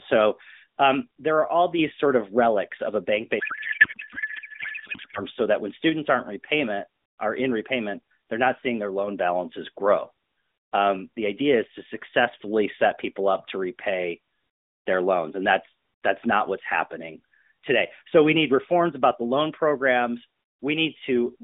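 From 3.40 to 5.22 s a codec payload misread occurs: the receiver unpacks the AMR frames with a different bit layout than the sender used, which fits octet-aligned payloads being read as bandwidth-efficient. The speech becomes garbled noise and warble that hardly tracks it, against the light, narrowband AMR sound elsewhere.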